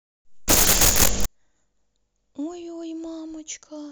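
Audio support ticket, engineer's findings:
Samples built from the wrong bytes, 0.48 to 1.26 s: loud broadband hiss replacing the speech for about 0.78 s. Probable component: decoder or file reader misassembling sample bytes (swapped order or one-byte offset), so low-order bits land in the high position. Spectrogram: flat full-band noise block, formant structure gone. Waveform: dense high-amplitude fill with abrupt edges at both boundaries.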